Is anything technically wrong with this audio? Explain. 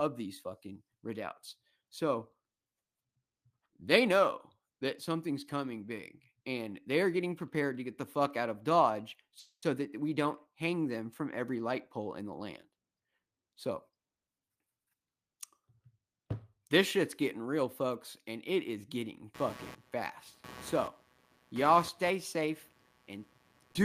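Yes, this speech clip has three separate faults.

A call audio freeze occurs from 9.39 to 9.64 s, just before "that we". The likely cause is packets held up in transit, so the jitter buffer ran dry and the receiver had to invent sound. It stretches the last sound into a fading buzz for about 230 ms, with the final 90 ms silent. When the speech resumes it picks up where it stopped, so nothing is lost but the delay grows by about 230 ms.

A jitter buffer speed-up runs from 13.28 to 15.16 s. After a backlog of audio built up in the buffer, the receiver trimmed it by cutting out many tiny pitch-period-sized slices in succession, about a fifth of a second in total. Because whole periods are dropped rather than the playback being sped up, the pitch stays the same while the speech plays at about 111% speed and sounds rushed.

Computer activity noise begins at 19.34 s, right after "and it is getting", and continues to the end of the clip. 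Shifts in processor, graphics or mouse load disturb the ground shared with the audio circuit. This adds a buzzy, pulsing interference at a rate of around 150 Hz and roughly 20 dB below the speech. It rises and falls with the machine's activity rather than with the talking.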